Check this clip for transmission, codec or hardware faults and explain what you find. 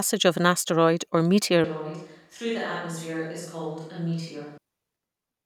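One fault stands out: a switch to a distant microphone from 1.64 s, right after "of an asteroid or", until 4.58 s. The speech abruptly turns roomy and hollow, loses bass, drops about 10 dB, and background noise rises to roughly 35 dB below the speech. The likely cause is that the close microphone's feed dropped out and a farther pickup, such as a camera mic, filled in. A simple gain dip would not add reverberation or room noise, and an EQ fault would not change both at once with sudden edges.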